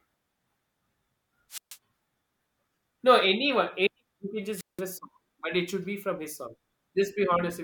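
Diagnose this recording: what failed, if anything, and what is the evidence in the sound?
Wireless microphone squelch dropout in the analogue radio link: hiss swells, then the receiver mutes for 136 ms at 1.50–1.77 s and 178 ms at 4.56–4.82 s. Static before each gap points to fading RF, not packet loss.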